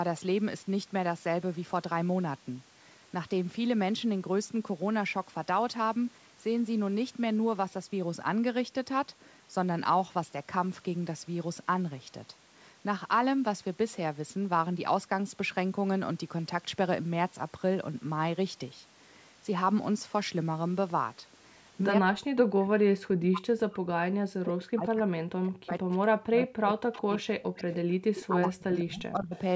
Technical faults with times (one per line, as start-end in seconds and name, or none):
21.99-27.82 speech suppressed in double talk
26.37-26.42 echo leak
26.94-27.01 echo leak
27.58-27.75 echo leak
28.15-28.29 echo leak
28.27-29.35 speech suppressed in double talk
29.34-29.39 echo leak